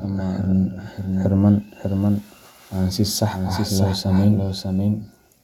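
Throughout the speech, every sound returns about 0.7 seconds later as a flat, full-band repeat, a few decibels quieter, with no decay or room colour. This is a doubled audio track, likely from a second capture path or an edit holding two offset copies.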